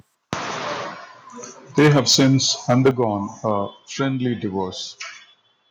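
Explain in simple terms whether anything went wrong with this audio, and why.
Two problems are audible in this speech. The first is microphone overload, at 1.78 to 2.36 s, 2.69 to 3.04 s and briefly at 3.46 to 3.51 s. The loudest moments sound harsh and crackly because their peaks are flattened. The likely cause is a microphone input set too high, so the signal exceeded what the recording could capture.

The second is the microphone volume being stepped down, at 1.79 s and 2.91 s. Each time, the voice and background suddenly get quieter, during a distorted stretch. This is likely the call software detecting the overload and cutting the input volume in one jump, with the second cut larger than the first.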